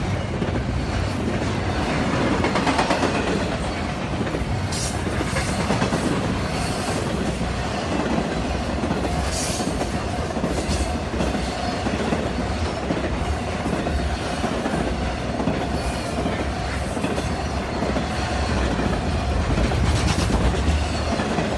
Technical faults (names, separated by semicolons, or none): resampler restarted on every block